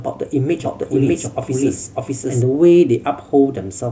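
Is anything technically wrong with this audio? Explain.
Yes. From 0.6 s to 2.42 s the speech has a doubled audio track. A second, full-band copy runs about 0.7 s behind the original, at roughly the same loudness. This likely comes from the signal being captured twice, once through a slower path, or from an edit that left two copies out of step. The late copy has no decay or room colour. It cuts in and out abruptly, so the speech overlaps itself for that stretch.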